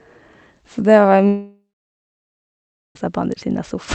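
In this speech clip, a long network dropout likely stopped audio arriving from 1.28 to 2.96 s: the last sound smears into a fading buzz, then about 1.3 s of silence, and the lost speech never returns.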